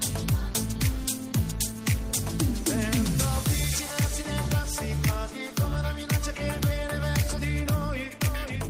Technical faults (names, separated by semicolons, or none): none